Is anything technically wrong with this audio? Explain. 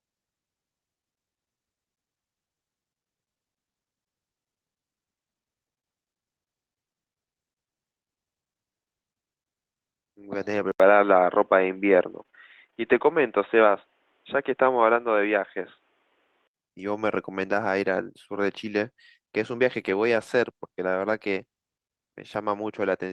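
Yes, the speech has three kinds of fault.

Short concealed packet loss occurs at 2.55–2.59 s and 5.79–5.85 s. About 20 ms and 40 ms of audio never arrived, and the decoder extended the preceding sound to cover each gap. Each sounds like a brief smear or wobble. On a spectrogram the harmonics flatten into a short, smooth stretch, and the waveform repeats the last cycles before rejoining.

From 10.72 to 16.55 s the sound turns dull and boxy. This is likely because the input switched to a poorer device. There is an 80 ms silence at the switch, a level jump of about 5 dB, and a new noise floor about 45 dB below the speech. On a spectrogram, everything above 3.8 kHz is cut off flat, and the waveform shows a short dropout at the switch.

Repeated packet loss (robotic sound) runs from 12.11 to 12.92 s. Six gaps, the longest 23 ms and about 120 ms in total, were each patched with continued sound, so 14% of that span is concealed. 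Around a third of a second sounds choppy. The spectrogram shows repeated short blocks of frozen, smeared harmonics.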